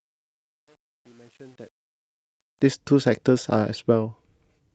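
From 0.0 to 2.67 s the speech fades in, and across that rise there is truncation distortion on a fade, worst up to about 2.19 s. The gain stage kept too few bits, which fits roughly a 9-bit path, and added no dither, so the quiet start is built from coarse square steps. It sounds gritty. That sets it apart from the steady hiss of dither or codec noise.

At 0.67 to 0.69 s there is a skip ahead. Something like 400 ms of audio was discarded while later audio was already queued, and the two sides are butted together with no filled gap. The jump is abrupt, unlike a dropout, which leaves silence or a smeared patch.

From 1.41 to 2.34 s a jitter buffer speed-up trims an excess of held audio by cutting short pitch-period slices, around 40 ms in total. The speech runs about 4% faster with its pitch unchanged. It does not sound chipmunk-like, which distinguishes it from a sample-rate error.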